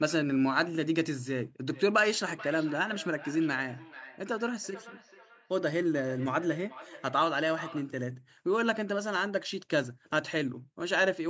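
From 1.67 to 7.98 s, a second device in the room plays the call aloud and the first device's microphone picks that playback up again, so there is feedback echo between two devices. Each phrase returns roughly every 400 ms, thinner and ringing, at up to about 18 dB below the speech.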